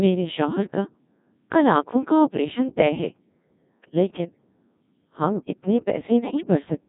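From start to finish the speech carries the Codec 2 vocoder sound, heavily damaged, with a thin, robotic buzz that fits the 1.6 kbit/s mode. The decoder keeps no original waveform. It rebuilds each frame from a pitch value, a voicing decision, a level and a coarse spectral envelope using summed sine waves. On a spectrogram, harmonics appear as neat, evenly spaced lines with blurred formants and smeared consonant noise. The waveform shows regular synthetic pulses rather than natural cycle-to-cycle variation.

From 6.22 to 6.47 s, just after "ہم اتنے", the voice breaks up into bleeps and warbling gibberish. These are bit errors on digital voice radio, at a rate of roughly one bit in twenty. In a bitstream this sparse, every flipped bit corrupts the pitch, level, voicing or spectrum of a whole frame. The damaged span points to about six frames. On a spectrogram the harmonic lines jump abruptly up and down in blocks, and the envelope's colour changes from block to block. 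The waveform shows stepwise level changes at frame boundaries.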